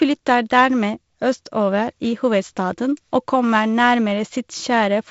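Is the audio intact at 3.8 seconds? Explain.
Yes, at 3.8 seconds the audio is intact, with the speech passing through G.722 wideband telephone coding as normal and no fault at that moment.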